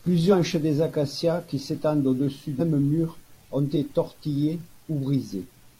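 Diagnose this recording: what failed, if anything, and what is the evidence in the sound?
Compressed frames skipped at the decoder: jumps at 2.56 s, before "mur ont", and 3.72 s, after it, each dropping about four 46.4 ms frames.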